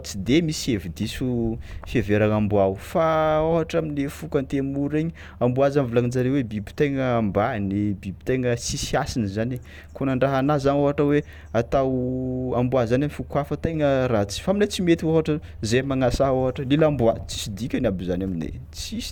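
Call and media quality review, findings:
Nothing stood out on listening to the speech in this recording.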